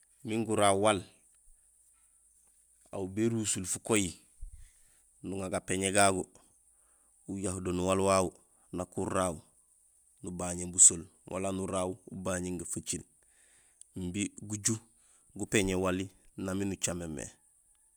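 A speech recording with no audible technical faults.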